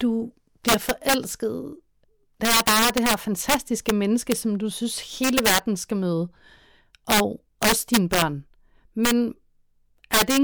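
Integer overflow runs throughout this speech clip: the signal is driven about 11 dB past full scale, and roughly one or two percent of samples exceed the limit and wrap to the opposite sign instead of being held there, so loud syllables break into violent cracks far harsher than ordinary clipping.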